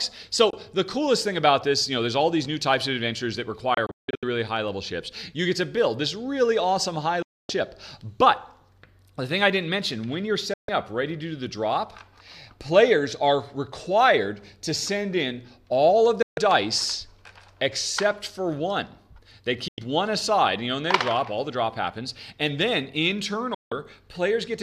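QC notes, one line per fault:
0.50–0.54, 3.74–4.23, 7.22–7.50, 10.54–10.69, 16.22–16.38, 19.68–19.78, 23.54–23.72 s: digital broadcast dropout. The receiver hard-mutes on lost frames, in gaps from 24 to 264 ms, which fits 24 ms frames. At 3.74 s it breaks into several holes, the longest 168 ms.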